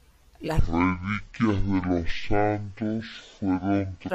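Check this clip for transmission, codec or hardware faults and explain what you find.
One fault is present in this speech clip.

Stereo read as mono, from 0.59 s to 4.10 s: the left and right samples are taken one after another as a single channel, so the speech plays at half speed and an octave low, 12 semitones down, with a fainter mirrored copy in the upper spectrum.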